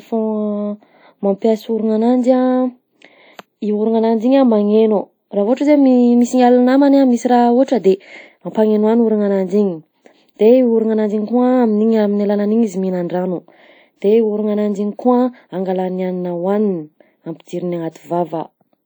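Right from the start and all the way through, the speech carries that ringing, washy smear you get from a transform codec, most likely WMA compression. Each long block spreads its quantisation noise over tens of milliseconds around the speech, so you hear a hiss that breathes along with the signal. The damage is plainly audible, which fits a low bitrate of around 48 kbps, and the content stops at about 20.1 kHz.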